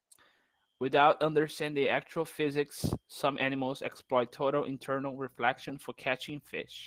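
Opus voice compression runs throughout the speech, with plainly audible damage consistent with roughly 16 kbps in hybrid mode: a linear-prediction coder handles the lower band and a transform layer covers content above 8 kHz. The coarsely coded excitation leaves the speech hoarse and slightly robotic.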